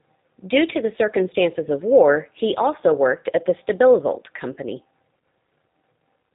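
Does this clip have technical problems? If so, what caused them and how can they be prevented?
Yes. G.729 codec damage runs through the whole clip. This codec rebuilds speech from a vocal tract filter model, a pitch predictor and a few pulses per 10 ms frame rather than from the waveform itself, so the voice sounds rough and slightly synthetic, with nothing above 4 kHz. The plainly audible coarseness fits an 8 kbit/s G.729A link. To prevent it, use a wideband, higher-bitrate codec such as G.722 or Opus wherever both ends support it.

VoIP packet loss concealed by the speech codec occurs from 5.20 to 5.23 s, a gap of about 30 ms that points to a single lost packet. The decoder filled the hole by stretching its last pitch and filter state with falling gain, giving a brief buzzy or noisy, smeared patch that fades. Because each frame builds on the one before, the speech stays weak or distorted just after the gap. 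To prevent it, improve network quality or prioritise voice traffic with QoS, and add forward error correction or redundancy.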